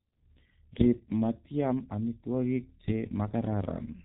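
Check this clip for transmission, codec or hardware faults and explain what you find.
The speech carries one fault throughout: heavy G.723.1 codec damage. Coding in 30 ms frames at a rate that fits about 6.3 kbit/s, the codec discards everything above 3.9 kHz and tracks the vocal tract sluggishly, so the speech sounds muffled and hoarse with smeared consonants. A spectrogram shows a flat ceiling at 3.9 kHz and blurred, frame-stepped formants.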